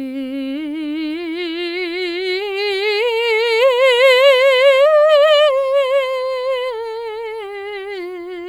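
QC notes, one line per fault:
Nothing to flag on this music clip, no faults heard anywhere in it.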